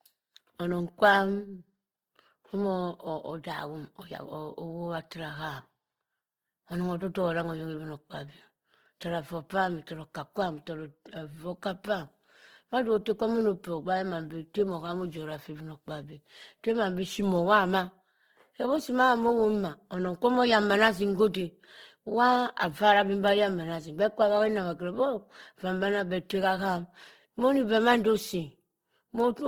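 Throughout the speech, likely Opus compression in CELT mode at low bitrate, fitting 16 kbps, fills starved bands with noise, making tones rough and grainy.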